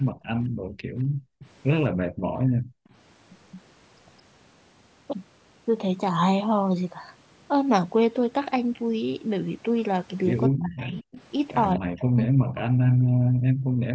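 From 0.12 to 1.39 s, the background is gated by the echo canceller. While the far end plays, the room sound is pushed down hard, by about 40 dB at its deepest, for around a second. Then it returns. At 1.39 to 1.49 s comes an echo leak. A faint copy of the speech follows 216 ms later, about 25 dB below it. The likely cause is a loudspeaker whose echo the canceller did not fully remove. From 1.97 to 2.26 s, speech is suppressed in double talk. Both sides likely overlap, and the canceller probably turns the talker down too. The speech dips by about 40 dB in pieces. At 2.54 to 2.86 s, the background is gated again and drops by about 40 dB. From 2.86 to 3.61 s, the echo leaks for longer. The 216 ms copy is stronger now, about 20 dB below the speech. From 10.5 to 13.53 s, double-talk suppression returns. The speech is cut in and out, by about 40 dB at worst, for roughly two seconds in total. 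From 13.81 s to the end, the background is gated once more.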